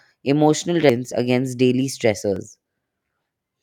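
At 0.9 s, just before "against daily", damaged data in the compressed stream makes the decoder misread a frame and lose sync until it finds the next header. At 1.12 s, again just before "against daily", the audio skips ahead by about 15 ms, and at 2.36 s, right after "against daily", it skips ahead roughly 10 ms. Both are likely dropped buffers (overruns), where samples were overwritten before being read and the surrounding audio was spliced together without a gap.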